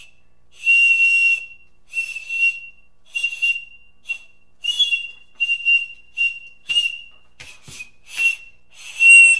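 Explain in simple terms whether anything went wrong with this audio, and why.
Nothing went wrong here; it's just sound, and there's no glitch or problem to point to anywhere in it.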